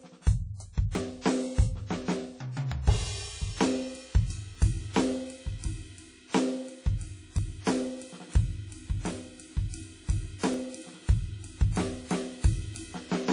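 WMA compression runs through the whole music clip: ringing, washy highs with breathing hiss, pointing to a low-bitrate transform codec, likely WMA at around 32 kbps.

Dropped buffer (overrun) at 0.95 s: a sudden jump as roughly 20 ms vanishes and the two sides butt together, likely because samples weren't collected before being overwritten.

Pre-echo from 1.22 to 1.25 s: a 39 ms hiss smears in ahead of a sharp attack, since block-wide quantisation noise fills the quiet moment before it.

The same dropped-buffer skip recurs at 2.72, 4.55, 7.38, 10.54 and 12.75 s, each a jump ahead of about 20 ms.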